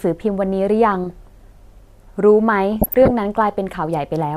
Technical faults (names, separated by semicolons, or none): DAB burbling